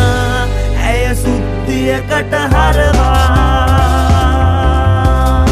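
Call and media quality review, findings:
No audible faults found in this recording.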